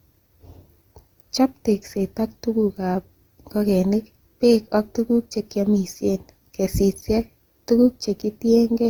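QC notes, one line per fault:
Throughout, generation loss: the speech was likely decoded and re-encoded about four times, consistent with Opus near 48 kbit/s. Each pass requantises on a shifted frame grid, so noise accumulates into a swirly, hollow, smeared sound with blurred attacks.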